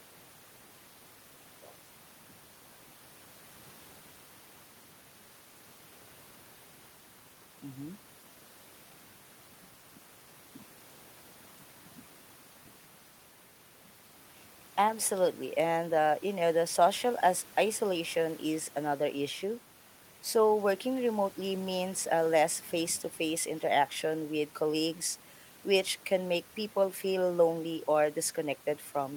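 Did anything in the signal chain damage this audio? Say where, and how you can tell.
No; just room noise, about 28 dB below speech.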